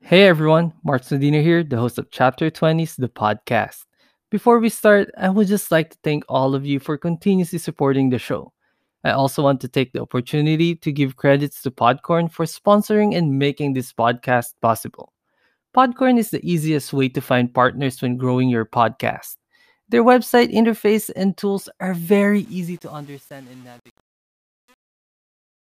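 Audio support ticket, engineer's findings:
Truncation distortion on a fade, 22.33–25.74 s. The fade-out (starts around 22.3 s) turns gritty from 22.59 s. Gain stage probably truncating without dither, which fits an 8-bit path. The low-level waveform collapses into coarse steps.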